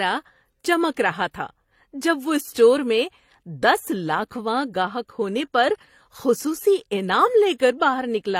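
Throughout the speech, transcoding between lossy codecs is the likely cause of the layered damage: the smeared, swirly texture of a parametric HE-AAC-style stage sits on top of an earlier codec's artefacts, with nothing above 16.3 kHz. That stacking separates it from a single low-bitrate encode.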